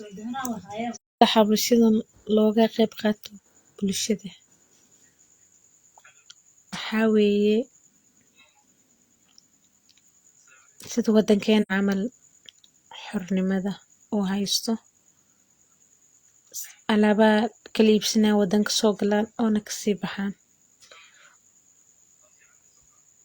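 At 0.94 to 1.22 s, just before "xabashadan loga qeb", and again at 11.62 to 11.72 s, there is AAC frame loss with muting: the speech fades smoothly into silence for about 256 ms and then 85 ms. Unlike a hard dropout, these holes have soft edges.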